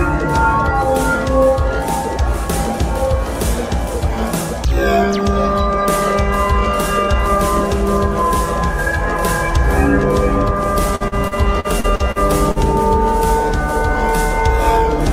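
Around 10.95 to 12.59 s the audio turns choppy and robotic. That's repeated packet loss. Packets keep going missing or arriving late, and each hole gets papered over by stretching out the last bit of sound, only for the next hole to hit moments later. The holes are short, the longest about 48 ms, but together the patching covers roughly 0.32 s, about a fifth of that stretch, hence the broken-up texture.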